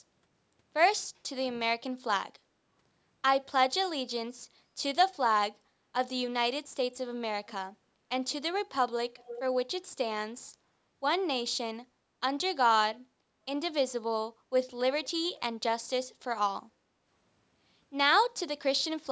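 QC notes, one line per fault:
7.47–7.53 s and 9.17–9.41 s, echo leak: a faint, delayed copy of the speech surfaces briefly, very quiet at first and then louder, about 15 dB below the talker on the second occurrence. Trailing the original by 348 ms, it is likely loudspeaker sound at the far end that slipped past the echo canceller and was sent back.
16.74–16.85 s, background gated by the echo canceller: the room sound ducks for roughly a tenth of a second, dropping by up to about 9 dB, then recovers. The canceller clamped the microphone down while its loudspeaker was playing and released it straight after.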